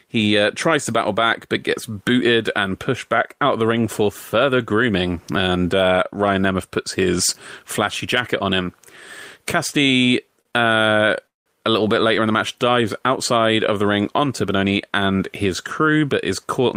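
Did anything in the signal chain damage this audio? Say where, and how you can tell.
Yes. The damage is in the network stage, at the receiver's jitter buffer.

Two short stalls from a late packet occur at 10.41 to 10.47 s and 10.51 to 10.55 s, just before "uh a little bit". The buffer ran empty, so the last sound was held about 38 ms, then 17 ms. Nothing is lost.

A call audio freeze runs from 11.27 to 11.48 s, before "a little bit later". The sound buzzes briefly, then goes silent for 170 ms. Packets were likely held up in transit. Playback resumes where it stopped, inserting 189 ms of gap.

A jitter buffer speed-up follows "of the ring onto", from 14.44 to 16.75 s. The speech runs at 107% speed with unchanged pitch and sounds hurried. The receiver cut many pitch-period slices, about 0.15 s in total, to shed the extra delay.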